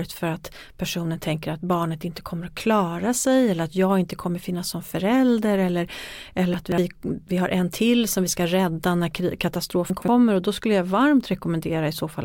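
At 6.54–6.78 s, just before "vi har en till", and again at 9.9–10.08 s, between "vi ska rädda när" and "och då skulle jag", chunks out of order jumble the speech. A 60 ms chunk plays three, then two, chunks late. Each event has three hard joins that show as vertical broadband lines on a spectrogram and abrupt steps in the waveform.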